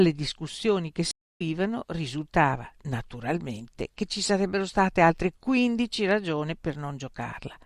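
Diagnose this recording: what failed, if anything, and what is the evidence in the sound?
Stream reconnect at 1.11 to 1.42 s, a network-stage failure. After "discussioni che" the speech drops to about 0.25 s of silence, then resumes at "risultava naturalmente che ci" having skipped roughly a fifth of a second of material. The connection broke, the player stalled, reconnected and started a new decoder mid-stream, joining the live feed further on. That fresh decoder start also mutes or fades in the first frame or so on resumption.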